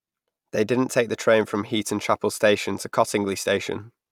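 A short bit of speech, and there's nothing technically wrong to point out anywhere in it.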